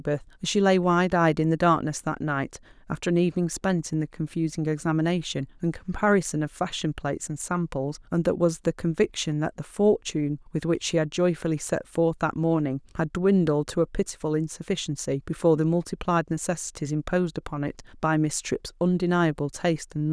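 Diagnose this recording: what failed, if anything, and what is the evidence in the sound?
Nothing failed here; I can't hear any sign of trouble at any stage of the chain in this speech recording.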